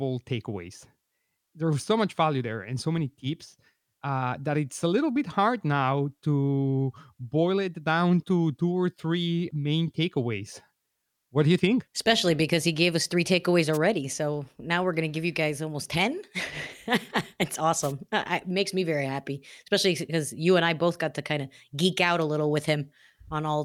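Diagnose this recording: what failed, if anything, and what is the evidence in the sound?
The analogue FM radio link faded, so receiver static swished through: wireless microphone noise hits at 13.73–13.78 s, after "gave us three takeaways", and 17.82–17.93 s.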